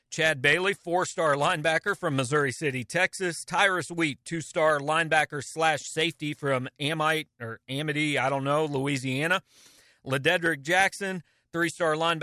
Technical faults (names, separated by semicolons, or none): none